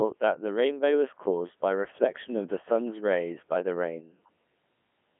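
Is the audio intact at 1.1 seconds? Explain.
No. At 1.1 seconds, as throughout the clip, the speech sounds robotic and buzzy, with nothing above 3.6 kHz. This is the Codec 2 vocoder: only pitch, voicing, energy and spectral shape survive, and sine-wave resynthesis, consistent with its 3.2 kbit/s mode, replaces the original waveform.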